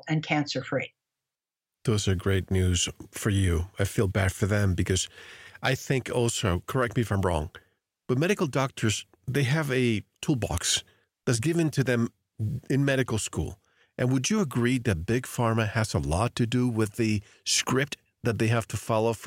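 No technical faults can be heard anywhere in this speech recording. Nothing in the audio stands out as a problem at any point along its length.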